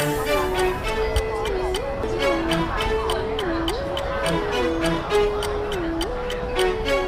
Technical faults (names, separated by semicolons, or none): CD skip